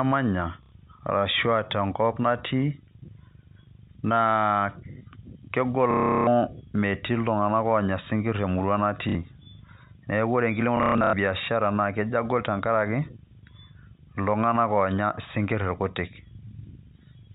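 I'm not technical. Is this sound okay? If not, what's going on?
No. The speech has packet loss with the last packet repeated: bits of sound went missing, and the line filled each gap by replaying the last bit again and again. This happens at 0.63, 5.91 to 6.27, 9.09 and 10.77 to 11.13 seconds. The longest gap is at 5.91, while the last one comes as broken-up pieces. Unlike a dropout, which goes silent, you hear a brief robotic stutter with a low buzz, which fits 30 ms packets. The muffled telephone sound is normal for a phone line.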